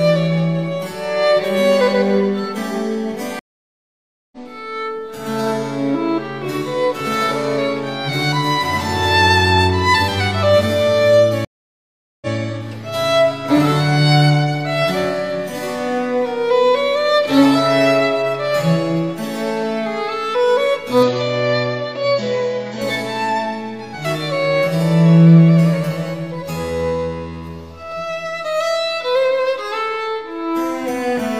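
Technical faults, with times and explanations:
3.39–4.37 s and 11.45–12.34 s, stream reconnect: the sound drops out twice, for 0.93 s and then 0.77 s, and each time it picks up at a different point. After the first gap it resumes roughly 0.7 s further on, skipping material. After the second it resumes 0.13 s earlier, briefly repeating a moment. The connection broke, the player fell silent, reconnected and started a new decoder mid-stream, and the server delivered the audio from a shifted position.
21.03–22.82 s, input switched to a poorer device: for about 1.8 s the sound turns duller, with nothing above 7.6 kHz, and a faint new background noise appears about 50 dB below the signal. There is no gap at either edge and the loudness stays roughly the same, so only the tone and noise floor change before the sound clears again. The likely cause is the system briefly switching its input to a narrower-band microphone with its own noise.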